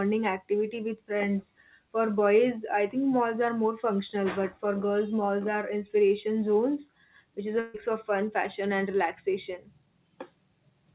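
At 7.6 s, running to about 7.76 s, the speech hits a burst of packet loss. Roughly 140 ms of audio never arrived in time, and the receiver covered the hole by extending the last sound for about 137 ms while fading it down, so a buzzy or hissy smear replaces the missing stretch before speech jumps ahead. On a spectrogram, already empty above 4 kHz as a G.711 A-law call path would be, the last sound's spectrum is held and repeated, then thins out. The waveform shows a decaying stretch with no silence before normal speech returns.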